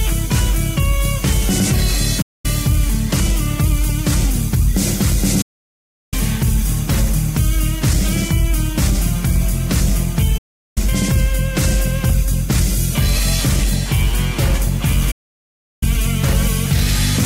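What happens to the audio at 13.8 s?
Nothing goes wrong at 13.8 s: the audio runs straight through that moment with no dropout, click, distortion or other fault.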